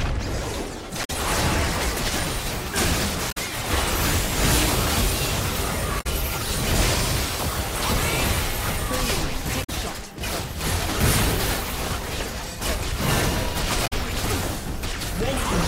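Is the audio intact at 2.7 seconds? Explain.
Yes, at 2.7 seconds the audio is intact, with no dropout, click, distortion or other fault audible at that moment.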